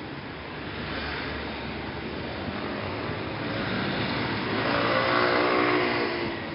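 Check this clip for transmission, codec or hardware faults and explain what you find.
No transmission, codec or hardware problems are audible here.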